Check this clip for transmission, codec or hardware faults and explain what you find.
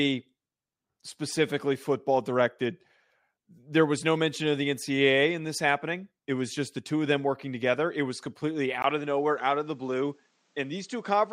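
One fault is present. An input switched to a poorer device at 8.82 s and stays that way to the end. The recording likely moved to a different, narrower-band microphone. After a 20 ms gap, the speech loses everything above 8.7 kHz, turns duller and somewhat quieter, and carries a faint new background noise.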